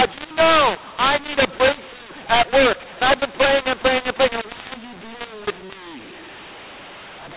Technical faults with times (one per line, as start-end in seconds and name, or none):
0.00-7.37 mu-law and A-law mixed up